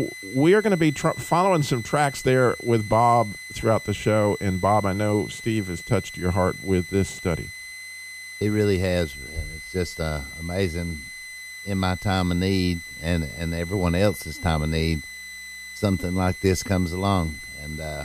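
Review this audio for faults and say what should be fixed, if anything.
A switching supply whistle runs under the speech for the whole clip: a high tone near 2 kHz, drifting between about 2.00 and 2.05 kHz, at about 15 dB below the speech. A switching regulator has likely dropped into an audible burst mode. On a spectrogram it is a thin, slightly wavering horizontal line across the entire clip. To prevent it, power the recording chain from a linear or well-filtered supply, or keep the switcher loaded enough to stay above the audible range.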